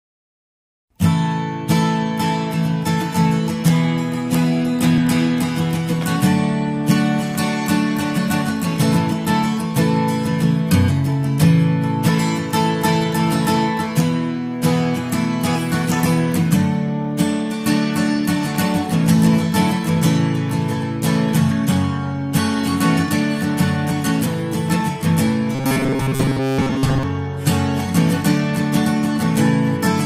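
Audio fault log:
25.55–27.03 s: robotic sound from repeated short buffers. A rigid 134 Hz metallic buzz replaces most of the sound. Likely cause: a roughly 7.5 ms chunk looping while fresh audio stalls.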